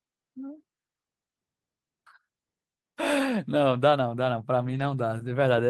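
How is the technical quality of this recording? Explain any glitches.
There's one glitch in the speech, near the end. From 4.63 to 4.85 s there's a lost packet rebuilt from error correction. Packets went missing, and the decoder filled about 120 ms with the low-bitrate backup copies carried in the following packets, which fits roughly six lost packets. So there's no dropout, just a brief stretch that sounds rougher and noisier.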